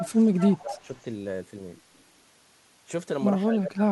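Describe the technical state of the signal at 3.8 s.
At 3.8 s the speech is pulled way down, maybe 25 dB, from 3.45 s to 3.91 s: speech suppressed in double talk, likely the echo canceller ducking during overlap.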